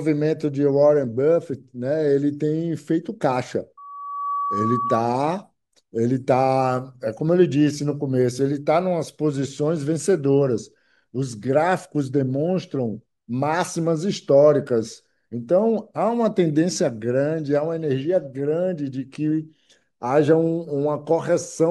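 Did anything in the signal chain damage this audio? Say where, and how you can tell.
Yes. From 3.77 to 5.05 s a 1.1 kHz tone swells over about half a second to roughly the level of the speech, which is loudspeaker feedback squeal. At the analogue playback stage, the microphone picks up its own loudspeaker, and loop gain above one at 1.1 kHz lets that tone build by itself.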